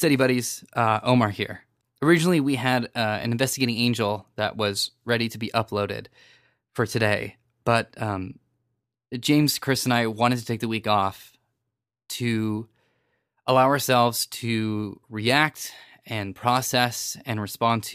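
No faults are audible anywhere in the recording.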